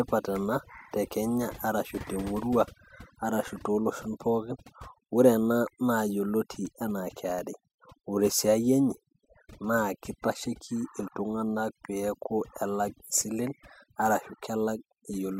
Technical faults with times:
0.00-15.39 overdone noise removal

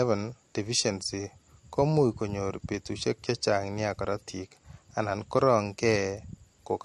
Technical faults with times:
0.00-6.84 transcoding between lossy codecs

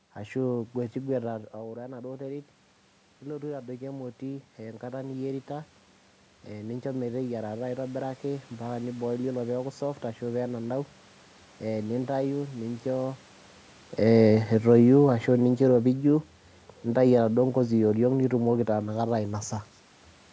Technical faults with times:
3.21-5.77 automatic gain rising

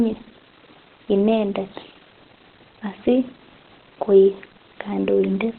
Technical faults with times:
0.00-5.59 Opus compression

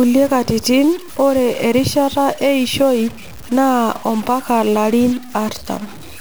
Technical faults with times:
0.00-6.21 stuck bit

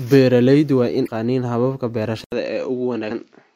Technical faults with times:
1.03-1.08 damaged data in a compressed stream
2.24-3.55 input switched to a poorer device

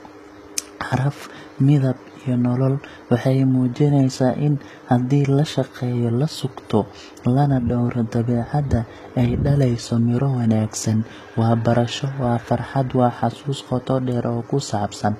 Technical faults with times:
0.00-15.19 HE-AAC compression

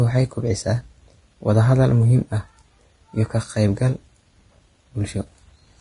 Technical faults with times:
0.00-5.80 Vorbis compression

